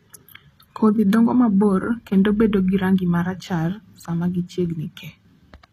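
From start to finish the speech carries plainly audible HE-AAC compression damage, likely at a low bitrate near 24 kbps. The treble is rebuilt from copied lower bands instead of coded, so sibilants sound gritty and lispy, and nothing remains above 14.9 kHz.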